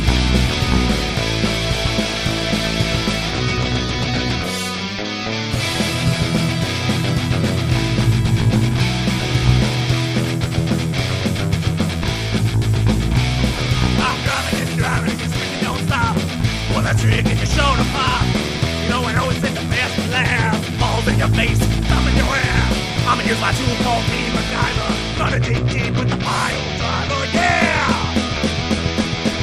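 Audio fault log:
24.16–26.72 s, channel delay (comb filtering): one channel trails by about a sample, so the mono sum cancels near 20 kHz, dulling the top; a spectrogram shows darkened high-frequency bands there.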